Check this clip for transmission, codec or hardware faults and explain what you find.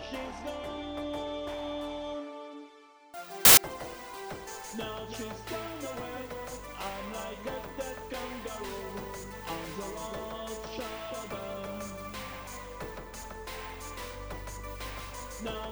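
One fault: from 3.45 to 3.57 s, samples built from the wrong bytes turn the sound into a loud burst of harsh broadband noise. The reader misassembles each sample's bytes, so the jittery low bits dominate.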